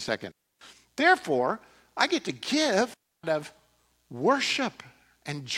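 A digital wireless dropout hits this speech clip twice: the link loses too much data, so the receiver mutes with a very fast fade, leaving clean holes of near silence lasting about 0.3 s at 0.31 s and 2.94 s, with no noise burst on either side.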